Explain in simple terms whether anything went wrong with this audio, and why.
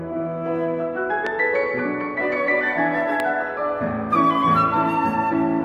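Loud pop at 1.27 to 1.29 s and again at 3.20 to 3.22 s: each is a single sharp click well above the surrounding sound, which carries on underneath. A sudden electrical jolt, likely from a plug, switch or static discharge, briefly got into the signal.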